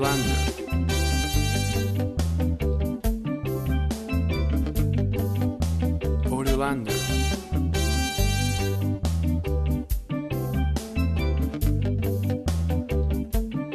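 No dropouts, distortion, timing glitches or other technical faults can be heard anywhere in the audio.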